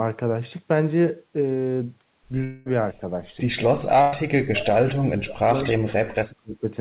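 Speech carried over a narrowband call path, with nothing above 4 kHz, which fits G.711 mu-law at 64 kbps. The clip has three faults. First, there is a long network dropout from 2.44 to 2.68 s, most likely a stall in packet delivery. About 220 ms of audio never arrived. The receiver filled the whole gap by stretching the last sound into a fading buzz or hiss rather than falling silent, and the speech then picks up further on, with that stretch gone. Next, a burst of packet loss runs from 4.02 to 4.14 s. Roughly 100 ms of consecutive audio was lost or arrived too late to play. The concealment carried the preceding sound forward and turned it down across the gap, leaving a short held, fading smear. Speech resumes slightly ahead of where it broke off, with the middle missing. Finally, from 4.46 to 6.64 s the speech is suppressed in double talk. The likely cause is the echo canceller failing to tell the near talker apart from loudspeaker echo while both sides spoke, so it attenuated everything. 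Across about 2 s the level dips, at its deepest by around 40 dB.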